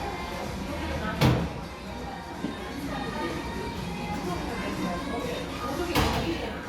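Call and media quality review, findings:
Nothing stood out on listening through the audio; no symptom to log against any component.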